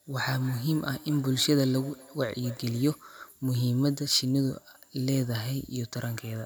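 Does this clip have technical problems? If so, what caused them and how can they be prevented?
Yes. From 0.37 s to 3.06 s the speech has a feedback echo between two devices: each word returns after roughly 200 ms, peaking at about 20 dB below the direct speech. Two devices in the same room are on one call. One plays what the other's microphone sent, and that microphone picks it up again. Neither echo canceller removes it because each handles only its own playback. To prevent it, keep only one device's microphone and speaker active in the room, or use headphones.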